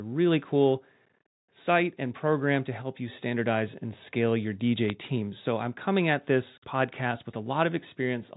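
At 4.88 s a short burst of bit errors on a digital phone line is heard as a cluster of sharp ticks laid over the speech. On this G.711 mu-law link, a flipped bit alters a single 8-bit sample, and when the sign or an upper bit is hit, that sample jumps far from its neighbours and produces a click. The burst is brief and points to a few frames being struck, at an error rate of a small fraction of a percent.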